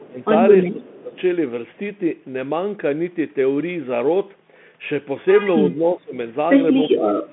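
Bluetooth CVSD headset codec damage runs through the whole of this speech clip. Nothing above 3.8 kHz survives, and the one-bit delta coding, which fits a 64 kbps CVSD link, has an adapting step that loud high sounds outrun. That leaves scratchy sibilants, distorted loud peaks and a grainy hiss beneath the talker. Speech suppressed in double talk comes at 0.0 to 0.2 s, 0.68 to 1.14 s and 5.79 to 6.16 s, where the level sinks by roughly 15 to 20 dB. The likely cause is an echo canceller that couldn't separate the near talker from loudspeaker echo while both sides spoke, so it turned everything down. An echo leak is heard at 1.13 to 1.18 s as a very faint copy of the speech arriving about 359 ms late. It is likely residual loudspeaker pickup that slipped past the far end's echo canceller and was sent back.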